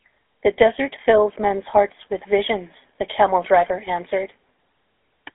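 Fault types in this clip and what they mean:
GSM full-rate codec: The whole clip has gone through the old GSM full-rate coder, which models the vocal tract and drives it with a sparse, regularly spaced pulse excitation, so the speech picks up that plainly audible buzzy, gravelly roughness. The sound sits in a phone-line band of roughly 300 Hz to 3.5 kHz, with nothing at all above 3.8 kHz, and the coarseness fits the 13 kbps full-rate mode.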